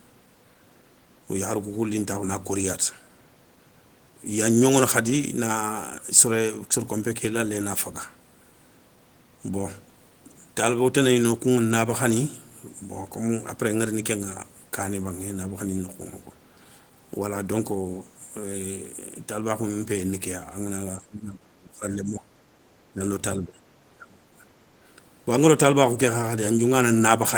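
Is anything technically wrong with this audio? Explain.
Yes. Near the end of the speech, the level repeatedly sinks and comes back. The longest dip runs from 20.99 to 22.42 s and drops by roughly 25 dB. Shorter dips follow at 22.93 to 23.01 s, 23.39 to 23.6 s and 23.95 to 24.42 s, the last again roughly 25 dB deep. The pattern is likely speech suppressed in double talk. An echo canceller hears both ends at once and turns down the near talker along with the echo.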